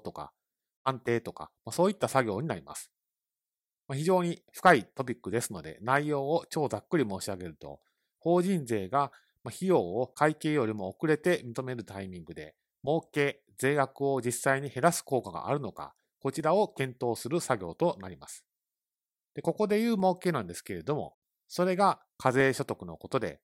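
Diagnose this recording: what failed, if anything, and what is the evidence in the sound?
A click recurs every 1.2 s through the speech, from 0.76 s to about 22.4 s, roughly twenty in all, evenly spaced regardless of what is being said. That regularity points to the driver or buffer stage, most likely clock drift buffer slips. Two devices on independent clocks disagree by a few hundred parts per million, so the buffer between them creeps until a block of about fifteen samples is dropped or repeated.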